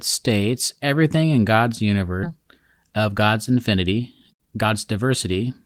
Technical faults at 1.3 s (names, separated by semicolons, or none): none